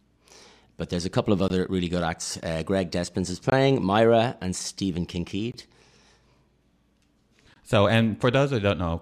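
At 1.48 s, between "there's a couple of" and "really good acts", the speech breaks for a 20 ms hole. The same hole returns at 3.50, 5.52 and 7.54 s. This is a gap between chunks: the audio was handled in 2-second blocks, and silence was inserted at each join. Unlike a dropout, where a slice of speech goes missing, no sound is lost here. The speech is pushed later, and the holes recur at a steady spacing of about 2 s.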